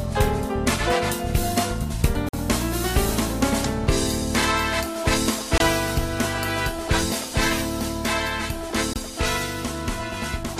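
Audio packets likely missed their delivery window to the headphones and were dropped, causing a Bluetooth dropout: silent holes at 2.29–2.34 s (46 ms, fitting two lost packets), then 5.58–5.60 s and 8.93–8.96 s (23 ms each, one packet). After each gap the sound resumes further along, as if it had kept playing.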